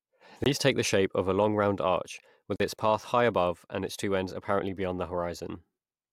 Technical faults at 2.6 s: block of digital silence

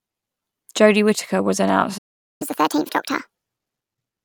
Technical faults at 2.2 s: playback stall

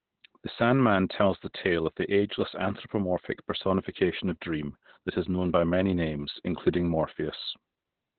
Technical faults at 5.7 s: Opus voice compression

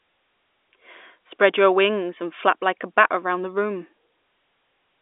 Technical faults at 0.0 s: none

